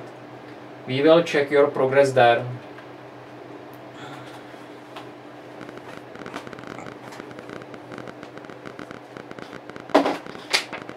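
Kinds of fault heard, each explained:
Train of clicks: from 5.61 s to 10.93 s, irregular clicks tick at 14.1 per second. Likely interference or a faulty connection or power supply.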